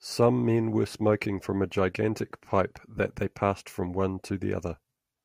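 Two devices are likely running on unsynchronised clocks about 200 ppm apart, so a single sample slips roughly every tenth of a second. From 0.2 to 5.2 s these clock slip clicks form a faint, regular ticking through the speech, around fifty in all.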